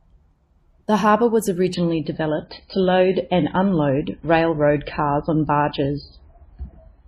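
At 1.74 s the speech abruptly turns dull and swirly with no gap, losing everything above 5 kHz through to the end. That is an adaptive stream dropping to a lower bitrate, the sound pointing to a switch from roughly 128 kbit/s to around 18 kbit/s MP3.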